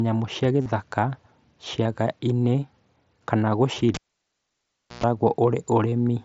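Speech recorded over a Bluetooth headset link, in which voice packets between headset and phone were lost and the receiver filled each gap by repeating the best-matching stretch of the waveform just before it. This concealed Bluetooth headset packet loss is heard at 0.61 to 0.66 s, a 45 ms run that turns into a short buzzy held tone with a slight warble as real sound resumes, and as briefer patches at 1.83 s, 3.74 to 3.76 s and 5.91 s. Separately, a live cable was pulled and plugged in between 3.94 and 5.04 s. A pop marks the disconnection, the sound drops to near silence for roughly a second, and a burst of 60 Hz mains buzz of about 110 ms follows while only the plug tip makes contact, before a second pop as the signal returns. Throughout, the wideband mSBC codec's light graininess on louder sounds can be heard.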